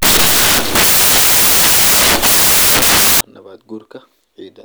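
Speech, with samples built from the wrong bytes from 0.00 to 3.21 s: misaligned bytes turn fast-changing low bits into the bulk of each value, giving loud, harsh broadband noise.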